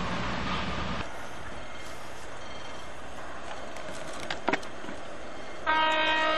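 At 1.61 s a brief glitch cuts through the sound. It comes from damaged data in a compressed stream. Part of the encoded data there is wrong. The decoder cannot read those frames cleanly, so it loses sync and hunts for the next valid frame header. Each blip lasts only about 14 ms. The same glitch returns at 3.17 s. A third follows at 5.05 s. All three are short, sharp glitches.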